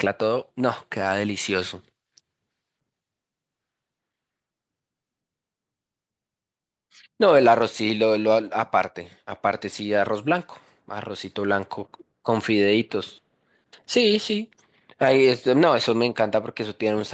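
No technical faults can be heard in this speech, which has come through a normal call microphone chain and Opus call path, with the high-pass filter trimming only the lowest bass and nothing reaching above 8 kHz, as expected for this kind of call.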